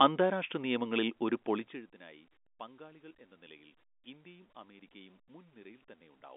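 No technical faults are present.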